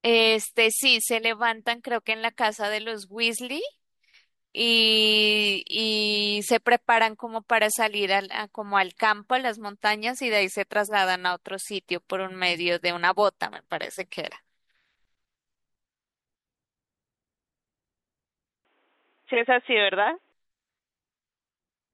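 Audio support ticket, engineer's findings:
Speech band-limited 18.65–20.32 s: nothing above 3.8 kHz, sound turns dull and boxy, then clears. No gap at the switch, level about unchanged, new noise floor roughly 40 dB down. Likely input switched to a poorer device, narrower capture path.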